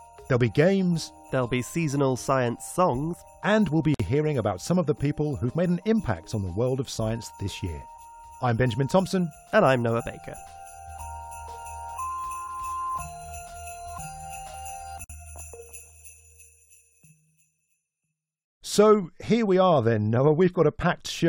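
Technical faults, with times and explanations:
3.94–4.00 s and 15.04–15.10 s: gap at a join of encoded pieces. The sound drops out for 52 ms and then about 53 ms, then resumes exactly where it stopped. Both silences have edges smeared by the codec. Each point is a seam between separately encoded pieces. At each seam, one piece's padded final frame meets the next piece's start-up delay of silence. Neither was trimmed, so the two together leave an audible hole.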